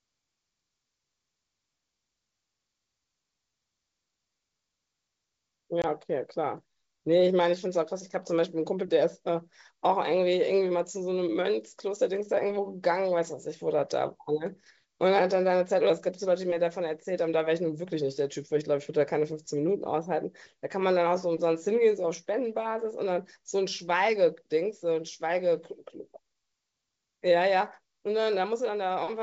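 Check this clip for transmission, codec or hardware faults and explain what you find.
One transmission fault: packet loss on an ADPCM call at 5.82 to 5.85 s, a hard-edged 20 ms silent hole, about one packet. Unlike a plain dropout, the audio then returns slightly distorted, because the decoder's predictor and step size briefly lost track of the sender's. The G.722 wideband link at 64 kbit/s carries the speech clearly.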